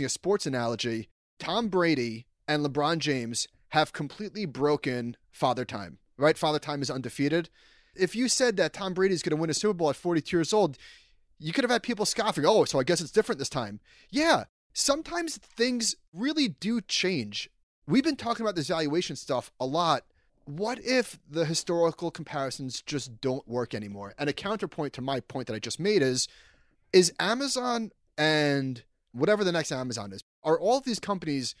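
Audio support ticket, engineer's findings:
No faults found on listening; the speech signal shows no audible dropouts, distortion or other transmission or processing issues.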